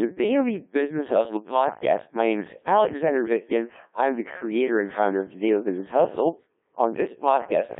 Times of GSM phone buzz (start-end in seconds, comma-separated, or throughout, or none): none